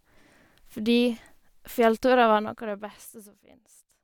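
From 2.32 to 3.36 s the speech drops by roughly 20 dB with zipper noise: the gain falls in unsmoothed 2 dB jumps at around ten per second, and each jump leaves a tiny click, so a rapid ticking rides on the voice throughout the fade. That stepped texture distinguishes it from a clean fader move, where the level glides down with no clicks.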